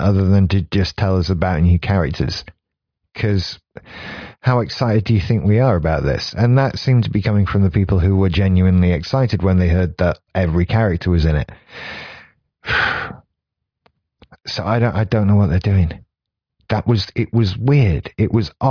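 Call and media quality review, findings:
No faults were found in the speech signal on this review, and none needs a ticket.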